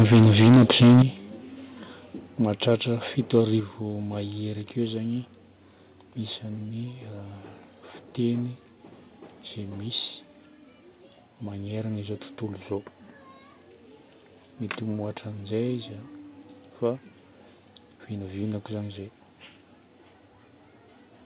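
From the start to 1.02 s the sound is flattened and gritty, with a crackling edge on every loud moment. This is microphone overload, likely from an input gain set far too high: peaks run about 11 dB past the converter's ceiling, and roughly a fifth of the samples are squared off. Unlike a simple loudness drop, it adds harsh distortion. The level stays high and the tone is broken.

A small microphone volume step down comes at 0.02 s, about 3 dB, and does not stop the clipping. At 1.02 s a larger step of about 10 dB cuts level sharply and the crackle ends with it. A third step of about 5 dB lands at 3.6 s, just before "mahery akeo". These drops are likely the call software lowering the input gain after detecting overload. Each is an instant, clean fall in loudness that takes the voice and background down together, with no added grit. That sets them apart from the clipping, which distorts without lowering the level. 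The narrow telephone bandwidth, with nothing above 4 kHz, runs through the whole clip.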